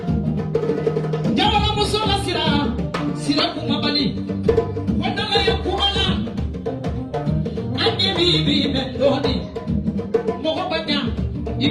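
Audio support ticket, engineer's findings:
No faults found; no dropouts, clicks, distortion or level problems audible anywhere in the clip.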